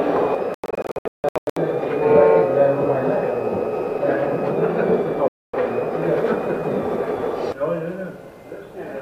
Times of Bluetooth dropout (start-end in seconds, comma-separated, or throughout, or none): 0.54-1.57, 5.28-5.54